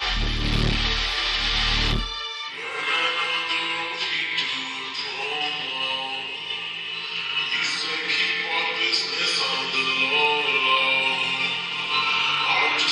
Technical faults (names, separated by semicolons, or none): none